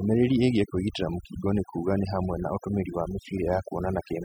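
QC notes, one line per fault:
Throughout: overdone noise removal. The noise reduction on this speech was pushed far too hard, so any frequency band sitting close to its noise estimate gets pulled way down or shut off. The background drops and breaks up into little twinkling specks, and the quieter parts of the voice get eaten too.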